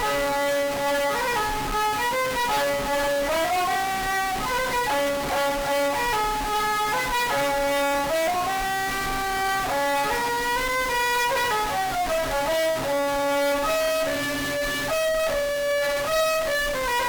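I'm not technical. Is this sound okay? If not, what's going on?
No. A stuck bit, likely from a faulty connection or converter, adds harsh, buzzy distortion throughout, and fills quiet gaps with fairly loud hiss.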